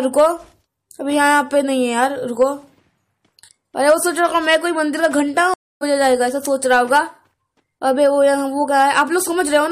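At 5.54 s the audio cuts out. This is a stream reconnect. The connection dropped, and the player went quiet for about 271 ms, until 5.83 s. It then reconnected and started a fresh decoder partway through the stream. When the sound returns, it does not pick up where it stopped. It jumps ahead by roughly a third of a second. The missing stretch is simply skipped, so the listener hears a gap followed by an abrupt forward jump.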